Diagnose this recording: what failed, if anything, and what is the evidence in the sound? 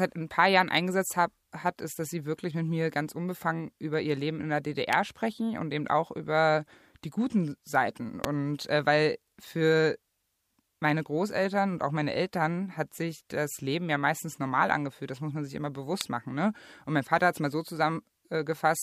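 Three sharp snaps sit on top of the speech at 4.93, 8.24 and 16.01 s, each over in a few milliseconds and peaking around -15 dBFS for the first and around -10 dBFS for the other two. That points to an electrical switching spike, likely a nearby switch, motor or static discharge arcing and getting picked up in the analogue wiring. The brief burst of energy couples into the line and lands on top of the signal as a snap.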